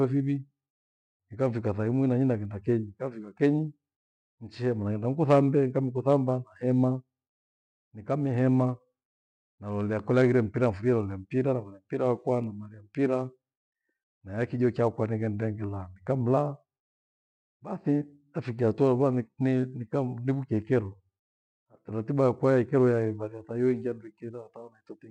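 Three sharp single clicks cut through the speech: at 2.45 s, between "ikafika tha imwi na" and "kenyi nkafika kenyi"; at 12.44 s; and at 18.59 s, just before "hataua lukua". Each is a thin, instant tick with nothing audibly missing around it. These are likely dropped samples: a fraction of a millisecond of the stream vanishes, so the waveform leaps abruptly to a later value, and that step is heard as a click.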